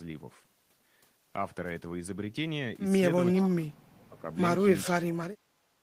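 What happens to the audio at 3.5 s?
The speech is pulled down hard from 3.36 to 4.26 s, dipping by roughly 30 dB at its deepest. This is speech suppressed in double talk. The likely cause is an echo canceller that, with both sides talking, could not tell this talker from loudspeaker echo and attenuated everything.

Near the start of that, from 3.37 to 3.48 s, a faint delayed copy of the speech slips through, about 15 dB below it and trailing by 444 ms. This is echo leak. It likely comes from a loudspeaker on one side whose canceller left some of its microphone pickup unremoved.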